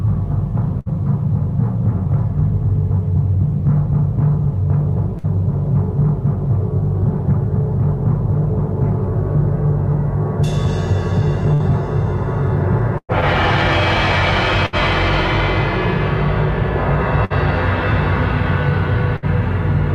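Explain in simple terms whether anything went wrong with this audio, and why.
Seven short dropouts are a burst of packet loss, at 0.79, 5.18, 11.54, 12.98, 14.66, 17.25 and 19.16 s. Each time, a bit of audio never arrived, so the player stretched the last sound, faded it, then skipped ahead. The 12.98 s gap runs longer and ends in brief silence.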